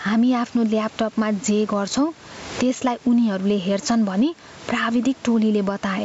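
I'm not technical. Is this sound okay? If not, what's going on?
No. Throughout this speech there is gain pumping. Loud and soft parts end up closer in level, so the sound is squashed. The level rises and falls, likely because the microphone level is set far too high and an automatic limiter clamps down on each loud moment.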